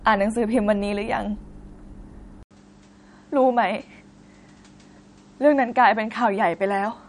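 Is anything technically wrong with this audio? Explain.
Yes, two faults are audible. Throughout, the speech has the watery, swirling texture of MP3 compression, with everything above 11.2 kHz removed. This is likely an encoder starved of bits, consistent with about 48 kbps, that cuts the treble and drops weak frequency lines frame to frame, so sibilants chirp and attacks smear.

At 2.43 s, after a gap of 80 ms, the input was likely switched to a poorer device. From there to the end the band stops near 9.5 kHz and the tone turns duller, with a faint new noise floor well below the speech and little change in loudness.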